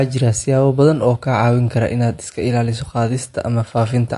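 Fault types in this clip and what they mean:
MP3 compression: The speech sounds watery and swirly, with nothing above 11.3 kHz, which points to a bitrate near 48 kbps. This is likely an MP3 encoder starved of bits, cutting the treble and letting weak frequency lines flicker between frames.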